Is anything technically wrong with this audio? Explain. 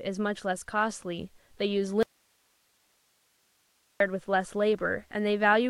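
Yes. Audio dropout to a faint residue, 2.03 to 4.00 s: the speech cuts abruptly for about 2 s, leaving only hiss far below the signal, likely a loss of the wanted signal with the path still live.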